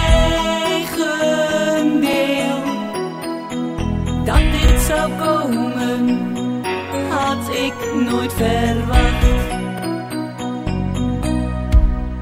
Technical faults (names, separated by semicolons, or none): overlapping chunks